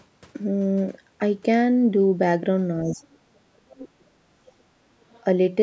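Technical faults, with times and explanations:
2.86–3.81 s: speech suppressed in double talk. The speech dips and breaks up, falling by roughly 40 dB at worst. Likely the echo canceller turned down both overlapping voices.
3.02–3.06 s: other side's voice leaking through. A brief faint scrap of a second voice appears, around 40 dB below the speech. This is likely loudspeaker echo the canceller missed.
3.81–3.89 s: other side's voice leaking through. A stronger fragment of the other voice follows the dip, about 20 dB below the speech. This is likely uncancelled loudspeaker echo.
3.97–4.59 s: speech suppressed in double talk. The speech again drops out in pieces, by roughly 40 dB at the deepest point. This likely comes from the canceller suppressing both sides during overlap.
4.87–5.06 s: background gated by the echo canceller. The room sound dips by about 16 dB for a moment, then returns as the canceller releases the microphone.
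5.11–5.23 s: other side's voice leaking through. A trace of the far voice sits around 35 dB below the speech. This is likely echo that the canceller left in.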